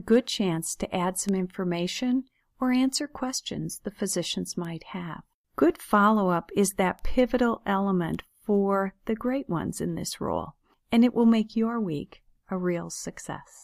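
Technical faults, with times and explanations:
1.29, 4.65, 6.99 and 8.15 s, bit error spike: single bits flipped in storage or on a digital link, jumping a sample or a few adjacent ones by a power of two before snapping back. Each is one sharp broadband tick unrelated to the sound, peaking at about -17, -23, -23 and -29 dBFS.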